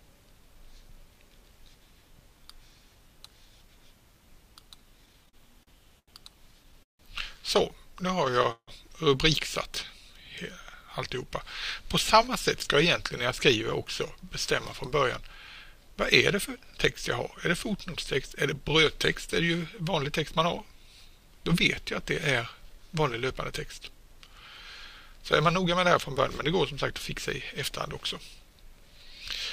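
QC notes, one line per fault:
4.97–7.01 s and 8.08–8.69 s, repeated stalls (stutter): the sound drags and hiccups as the jitter buffer empties about fifteen times. The receiver extends the last sound through each gap of up to about 160 ms, so nothing is lost.
13.79–20.53 s and 25.12–28.88 s, jitter buffer speed-up: the sound runs 2–3% fast at unchanged pitch. To shrink a swollen buffer, the receiver trims short pitch-period slices, roughly 0.15 s and 0.1 s in total.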